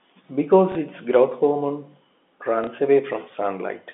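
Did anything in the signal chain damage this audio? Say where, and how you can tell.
Yes, at the network stage: packet loss with the last packet repeated, at 0.72–0.75 s and 2.64–2.67 s. Each 30 ms gap, which fits one lost packet, is filled by replaying the previous one, giving a brief small blip within the G.711 telephone band.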